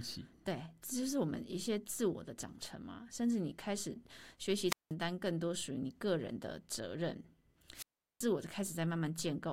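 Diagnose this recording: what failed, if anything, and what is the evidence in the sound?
The analogue radio link between a wireless microphone and its receiver failed twice, ahead of any conversion: the FM carrier faded until the receiver's squelch cut the output, a wireless microphone squelch dropout. Speech breaks at 4.67–4.93 s with a mute of about 0.18 s, and again at 7.73–8.26 s with a longer mute of about 0.38 s. Each time, hiss swells as the signal weakens, the gate closes to near silence, and speech resumes once reception recovers.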